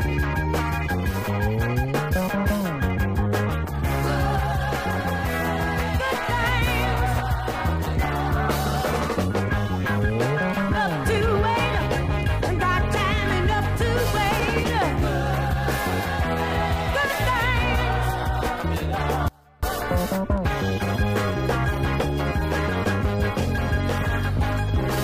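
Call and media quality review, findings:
Audio dropout to a faint residue, 19.28 to 19.63 s. Sound cuts abruptly for about 0.34 s. Gap holds only a faint leak, roughly 30 dB below normal level. Likely a brief signal loss upstream, with the downstream path staying live.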